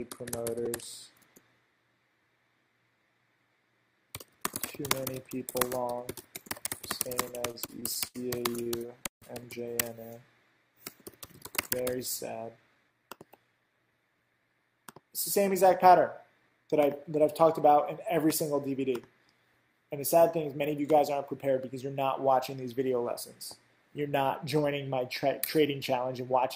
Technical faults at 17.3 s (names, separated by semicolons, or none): none